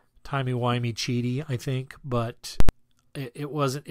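Invalid numbers at full scale hit from 2.60 to 2.69 s, after "cheaty I think but": broken calculations pinned the output at one extreme value, a loud bang.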